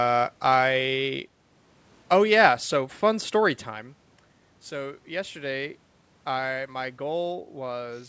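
Nothing in the recording stood out as a technical fault on listening.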